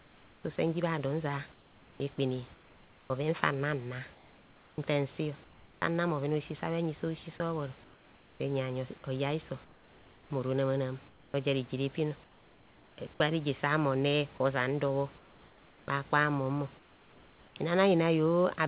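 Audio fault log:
0.00–5.82 s, 7.38–12.98 s, 14.38–17.56 s: comfort noise in place of the background. In each stretch the real room background, which sits about 27 dB under the speech, turns flat and featureless for a while: roughly 2.5 s, 2.2 s and 1.5 s of it. The second stretch ends just before "gwa reje". That's likely discontinuous transmission: the sender goes quiet in pauses, and the receiver makes up steady noise shaped roughly like the room.
7.38 s, 14.38 s: sound dropped by the voice detector. At each point about 10 ms of real sound goes missing and steady noise plays for 20 ms in its place. The likely cause is the sender's detector treating a quiet sound as background and cutting transmission just as the comfort noise takes over. Everything runs through a band-limited call path with nothing above 4 kHz, which fits a G.711 codec.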